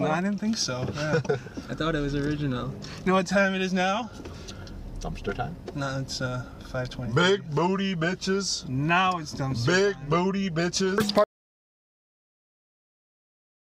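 At 11.24 s the sound cuts out abruptly. From there to the end, about 2.5 s, there is dead silence with no room tone at all. This is an audio dropout to silence, most likely a lost input while the recorder kept writing zeros.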